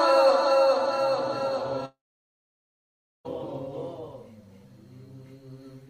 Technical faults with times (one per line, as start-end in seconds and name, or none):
1.85-3.27 long network dropout